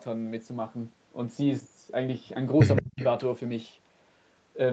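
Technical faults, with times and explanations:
2.76–2.82 s and 3.02–3.06 s, echo leak: The far end's echo canceller likely let through part of what its microphone picked up from its loudspeaker, and that residue was sent back. Each time you hear a delayed copy of the speech trailing the original by 169 ms. The first scrap sits about 10 dB below the direct speech. The second, right after the dip, is about 30 dB down and only a brief ghost.
2.81–3.02 s, speech suppressed in double talk: With both sides talking at once, the echo canceller likely could not tell the near talker from the returning loudspeaker echo, so it attenuated everything it saw. The speech drops sharply, by roughly 35 dB at its deepest, for about a fifth of a second. It sounds like the talker briefly vanishes or cuts out before recovering; the call audio throughout is band-limited, capped at 8 kHz.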